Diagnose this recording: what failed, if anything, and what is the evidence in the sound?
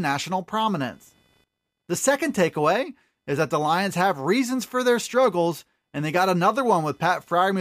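The analogue wiring failed: computer activity noise got into the audio ground, where processor and peripheral load changes shift the shared reference. A faint buzz pulsing around 500 Hz, some 45 dB below the speech, runs through the whole recording and tracks machine activity rather than the talker.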